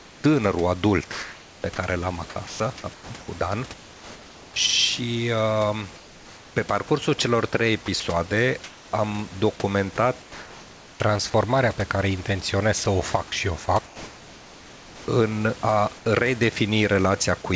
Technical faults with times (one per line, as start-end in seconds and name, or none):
0.00-0.24 comfort noise in place of the background
1.12-4.56 sound chopped by the voice detector
5.96-6.90 comfort noise in place of the background
6.88-6.90 sound dropped by the voice detector
7.86-8.92 sound chopped by the voice detector
10.22-11.00 comfort noise in place of the background
12.84-15.08 sound chopped by the voice detector
15.98-16.06 comfort noise in place of the background